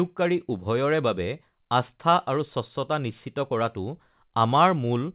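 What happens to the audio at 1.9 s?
Nothing goes wrong at 1.9 s: the speech there passes through the G.711 call path intact, with the narrowband sound of a phone line and nothing above 4 kHz.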